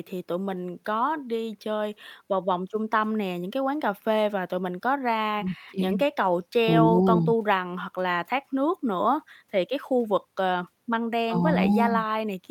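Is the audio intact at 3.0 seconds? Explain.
Yes, the speech at 3.0 seconds is intact, with no dropout, click, distortion or other fault audible at that moment.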